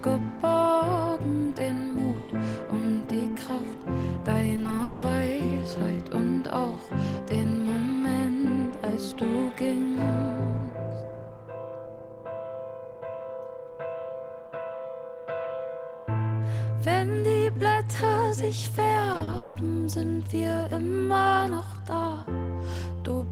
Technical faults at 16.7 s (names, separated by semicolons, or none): none